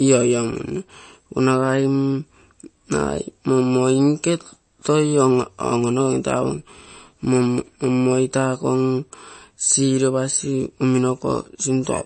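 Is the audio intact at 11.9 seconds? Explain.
No, at 11.9 s you're still hearing the MP3 compression damage that runs through the whole speech clip. Nothing comes through above 8.3 kHz, and there's a watery, swirly texture, likely from a starved encoder dropping weak frequency lines frame to frame, which fits a bitrate around 32 kbps.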